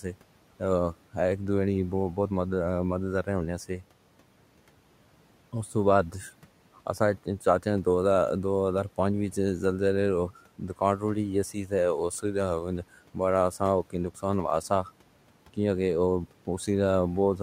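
At 11.54 to 11.72 s the noise suppressor misjudged part of the speech as background and pulled it down along with the room noise, a case of speech cut by the noise suppressor. The gain dips by about 9 dB at its deepest, and roughly a tenth of a second of speech is affected, so a soft stretch there sounds swallowed and faint against the room noise, which sits about 24 dB below the speech.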